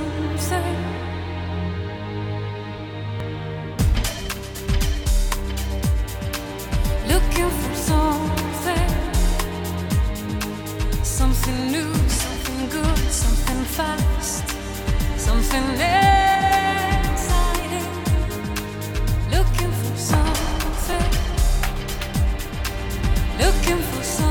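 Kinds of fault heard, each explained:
Repeated buffer: late audio made the device replay its last short block, about 5 ms long, once at 3.2 s and twice at 20.93 s. Each repeat sounds like a brief click, showing as a copied waveform stretch with hard joins and thin vertical spectrogram lines.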